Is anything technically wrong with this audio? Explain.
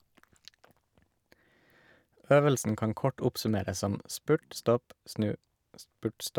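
No, nothing technically wrong is audible in this recording.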